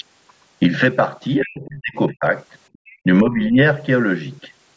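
Speech suppressed in double talk, from 1.41 to 2.26 s: the speech sinks by as much as about 40 dB over most of that span. The likely cause is that both ends were talking at once. The echo canceller couldn't tell the local talker from the loudspeaker echo, so it pulled the whole microphone signal down, taking the talker with it.

Other side's voice leaking through, from 2.73 to 2.97 s: a faint second voice sits around 30 dB below the main speech. It most likely comes from the far end playing over the loudspeaker and reaching the microphone, where the canceller failed to subtract all of it.

Background gated by the echo canceller, from 2.78 to 2.89 s: inside that leak, the room tone drops by about 40 dB for roughly a tenth of a second, then comes back. While the loudspeaker was active, the canceller clamped the microphone hard and briefly cut the ambience to near silence. It let go once the far-end signal eased.

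Speech suppressed in double talk again, from 3.21 to 3.58 s: this is a shallower dip of roughly 10 dB lasting about a third of a second. The speech turns quieter, with the same overlap of both talkers as the likely trigger.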